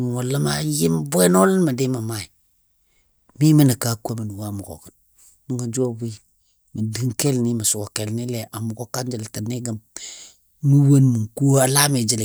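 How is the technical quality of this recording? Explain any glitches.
No glitches or technical faults can be heard anywhere.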